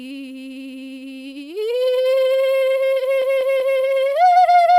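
From 3.22 to 3.79 s the music stutters: a 192 ms block of repeated frames plays three extra times, consistent with a run of six compressed frames being duplicated before decoding. The decoder replays that same fragment, so playback lengthens by 576 ms.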